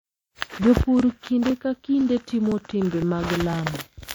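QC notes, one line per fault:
0.49, 1.00, 1.50, 2.01, 2.52, 3.02 and 3.53 s: overlapping chunks. Each half-second chunk starts about 7 ms early, so that sliver replays as a small stutter-click, e.g. right before "kinde ka" and after "timo timbe".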